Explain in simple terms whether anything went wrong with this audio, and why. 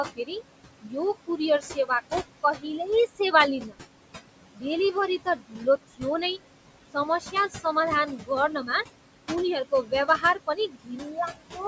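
Yes, something went wrong. Noise suppressor artifacts run through the whole clip. The background noise is pushed down hard, so it pumps between words.

The speech is also cut by the noise suppressor. It mistakes parts of words for noise and turns them down. Soft sounds go faint at 0.16–0.37, 0.82–0.96, 1.27–3.75, 4.53–6.03, 6.94–7.65, 8.06–8.85 and 9.71–11.58 seconds.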